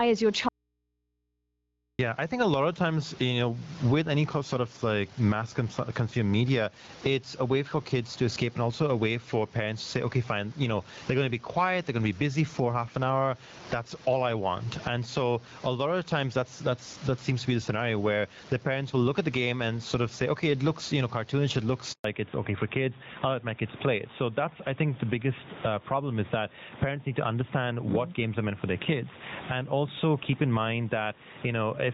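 Gain pumping runs through the whole recording: the level swings by around 15 dB. The likely cause is input gain set much too high for the microphone, with a fast limiter or compressor clamping each loud syllable. Loud and quiet passages end up squeezed together, giving the speech a flattened, breathing quality.

An audio dropout to a faint residue runs from 0.49 to 1.99 s. The speech cuts out abruptly after "is your" and returns just as suddenly at "I think a lot", so about 1.5 s is missing. The gap is not silent; it holds a low mains hum at about 50 dB below the speech. That points to the signal being lost ahead of a still-live input stage, rather than a natural pause or fade.

A handover gap falls at 21.92 to 22.04 s, straight after "you know cartoonish it". For 120 ms the voice drops away and nothing comes through. This is what a call sounds like when it is switched from one network to another and no speech frames arrive during the transfer, so whatever was said in that moment is simply gone.

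Fallback to narrowband follows immediately, from 22.04 s to the end. Before this point the wideband AMR-WB codec at 12.65 kbit/s carries the voice with good presence. After it, nothing above 4 kHz survives, which fits a switch to AMR-NB at 12.2 kbit/s. The top end and sibilance disappear, and the voice turns duller, boxier and rougher, the classic older-phone sound.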